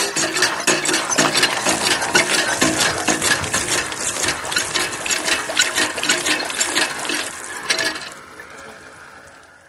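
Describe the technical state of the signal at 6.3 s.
At 6.3 s, as throughout, the resampler restarts on every 10 ms block during 24 to 48 kHz conversion, leaving edge errors: a 100 Hz buzz, seen as evenly spaced spectrogram stripes.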